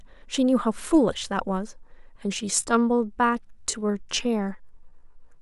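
Speech, with a time-stretched section from 2.33 s to the end: the pace drops abruptly to 0.70 times normal while pitch stays unchanged, so the speech drags. The likely cause is software lengthening the audio to fit a duration by repeating short pieces.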